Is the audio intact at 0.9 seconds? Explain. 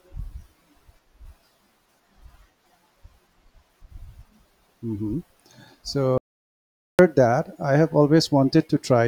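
Yes, at 0.9 seconds the speech plays through intact, with no audible fault at that moment.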